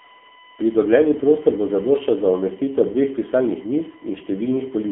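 From the first moment to the end, the speech carries a USB whine. It is a fixed tone built on 1 kHz, with its strongest component at 8 kHz. The USB bus draws current in regular 1 ms frames and 125 microsecond microframes, and that ripple leaks into the audio through power or ground. It sits roughly 30 dB below the speech. It is a thin, steady, high-pitched whistle that does not change with the talking.

The whole clip also passes through the AMR narrowband mobile codec, the AMR-NB speech coder used on 2G and 3G calls. The band runs from 200 Hz to 3.5 kHz, and nothing above 3.7 kHz comes through. The voice sounds muffled and boxy, like a phone call. The coding damage is heavy. The codec rebuilds the voice from a vocal-tract model excited by only a few pulses. The result is buzzy and synthetic, which fits a low bitrate of around 6.7 kbps.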